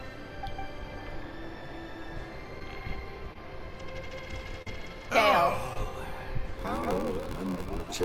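Short concealed packet loss occurs four times: at 2.59 s (about 10 ms missing), 3.33 s (20 ms), 4.62 s (40 ms) and 5.73 s (20 ms). The receiver filled each hole by extending the preceding sound, so each is a brief smear or wobble. On a spectrogram, each shows as a short stretch of smoothed, repeated harmonics or flat noise. On the waveform, it appears as an oddly regular patch.

From 6.56 s to the end, a block size mismatch (padded) sets in. Each block read, which fits 512 samples, is partly zero-filled, producing an 86.1 Hz buzz and audio slowed to 0.861 times normal speed at roughly the same pitch. The waveform shows evenly spaced flat gaps, and the spectrogram shows vertical stripes.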